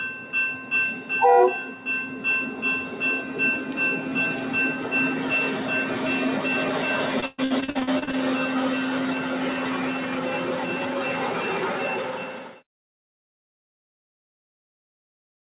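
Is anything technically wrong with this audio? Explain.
Yes, two faults stand out.

From 7.2 to 8.17 s there is repeated packet loss, producing a robotic sound. Audio packets went missing again and again, more than a dozen gaps in under a second, the longest 122 ms. Each time the receiver papered over the hole by stretching out the last bit of sound it had. That filler covers nearly half of the stretch, so the audio turns choppy, with pieces dropping out.

From 12.17 to 12.63 s the sound is cut by the noise suppressor. The suppressor mistook part of the wanted audio for background noise and pulled it down, by about 4 dB at the deepest point, for roughly half a second. The result is a brief dip where the sound thins and sinks below the level around it, with its sustain or tail trimmed. The whole clip is also band-limited at 4 kHz, which fits a G.711 telephone codec at 64 kbps.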